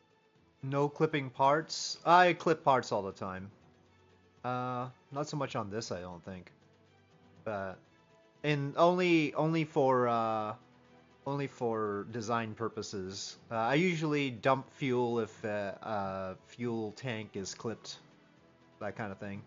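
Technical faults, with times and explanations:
No technical faults can be heard anywhere in the clip.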